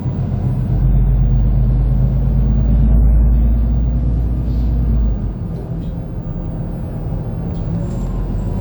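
Generation loss runs throughout. The sound is swirly, hollow and smeared, with blurred attacks. It is likely from about seven re-encodes, fitting WMA 1 at 128 kbit/s.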